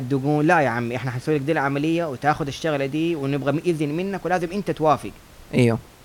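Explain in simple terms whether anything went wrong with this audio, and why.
Nothing went wrong with this audio; the faint background noise you may notice is simply the room the microphone was in, well below the speech and part of the recording itself.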